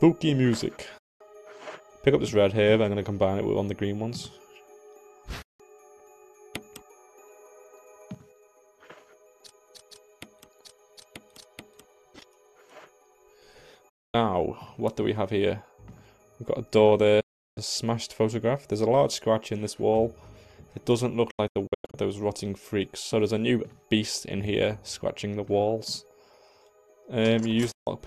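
Digital broadcast dropouts at 0.98, 5.42, 13.89, 17.20, 21.31 (several short holes over 0.64 s) and 27.71 s: the receiver mutes with an 8 ms fade for 0.14 to 0.36 s, losing that sound.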